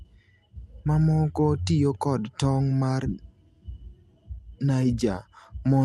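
Speech carried over a call path, and nothing is technically wrong with it.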